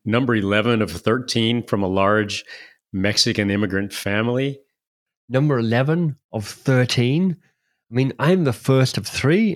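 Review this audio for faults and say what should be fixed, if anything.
Nothing needs fixing, as the speech signal shows no technical faults at any point in the recording.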